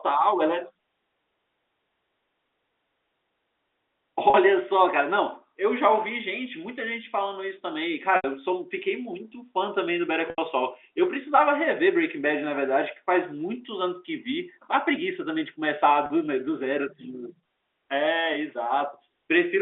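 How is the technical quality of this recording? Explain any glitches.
Telephone-band speech, limited to roughly 300 Hz to 3.6 kHz as G.711 audio would be, with four short dropouts. Packet loss with pitch repetition occurs at 4.30 s and 16.06 s (40 ms each) and at 8.16 s and 10.30 s (80 ms each). The receiver bridged each missing stretch by looping the last pitch period and fading it out, so the 40 ms gaps sound like a brief held, buzzy tone, while the 80 ms gaps fade into silence before speech returns with a short cross-fade.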